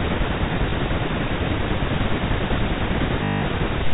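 At 0.70 to 0.72 s, packet loss with the last packet repeated leaves a small blip. The player filled a 20 ms gap by replaying old audio. From 3.24 to 3.42 s, a longer 180 ms run repeats and buzzes near 50 Hz, a short robotic stutter.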